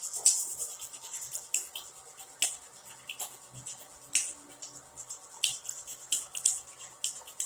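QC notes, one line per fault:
Throughout: Opus compression. Tonal parts of the sound come out noisy, rough and grainy rather than swirly, and the plainly audible damage has the character of a likely Opus encode in its CELT music mode. Each band keeps its energy, but with bits this scarce the encoder fills detail by folding lower bands up or padding with noise. The full bandwidth survives, even at a low bitrate of around 16 kbps.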